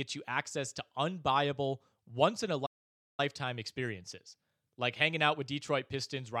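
A playback stall interrupts the speech from 2.66 to 3.20 s, a gap of about 0.52 s. The voice cuts out mid-flow and the output drops to complete silence, then the speech picks up again. The likely cause is the player's buffer running dry, or its playback thread being held up, so no samples reached the output until the stream recovered and playback resumed.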